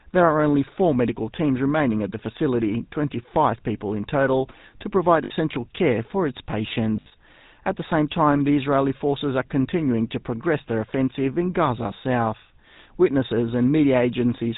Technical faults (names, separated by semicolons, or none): GSM full-rate codec; lost GSM frames